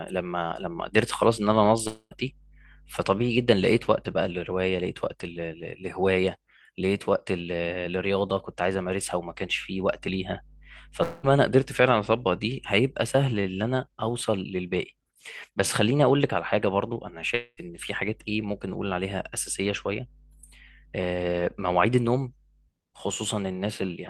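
Speech, in which the incoming audio most likely stopped arriving three times, a long network dropout at 1.87 to 2.13 s, 11.03 to 11.25 s and 17.35 to 17.59 s. About 240, 200 and 220 ms of sound are lost. Each time the receiver stretches the last sound into a fading buzz lasting around 0.2 s, leaving a brief silence of 30 ms in the first gap and 20 ms in the third. The speech then resumes with the lost portion skipped.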